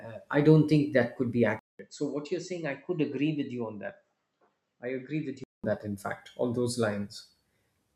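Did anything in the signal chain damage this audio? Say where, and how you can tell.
Yes. From 1.59 to 5.64 s, after a 200 ms gap, the speech drops in level and loses everything above 7.9 kHz, most likely an input switched to a poorer device.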